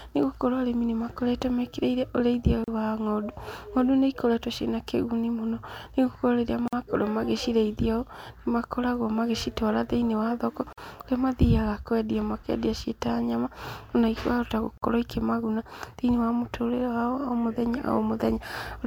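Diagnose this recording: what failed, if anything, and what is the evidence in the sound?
Codec: gaps at encoded-piece joins at 2.64, 6.68, 10.73 and 14.78 s, 36–49 ms long. Untrimmed encoder delay and padding leave silent holes in the waveform and spectrogram.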